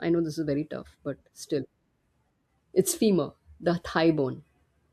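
At 2.18 s the decoder loses a run of compressed frames, either absent from the stream or thrown out as corrupt, and the playback simply carries on from the next good one. The result is compressed frames skipped: the speech leaps forward by around a fifth of a second, which fits roughly five frames of 42.7 ms each.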